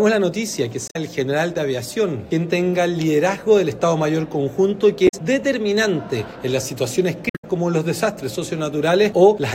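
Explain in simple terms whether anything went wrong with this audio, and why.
Damaged data in a compressed stream causes brief glitches at 0.85–0.96 s, 5.05–5.14 s and 7.27–7.45 s, where corrupted bytes make the decoder misread frames and lose sync.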